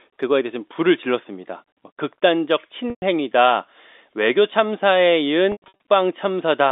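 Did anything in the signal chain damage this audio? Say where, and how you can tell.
Yes. Packet loss with pitch repetition, a network fault, at 2.90 to 3.02 s and 5.52 to 5.74 s: the receiver repeats the last pitch period over each gap, giving a held, buzzy sound that fades.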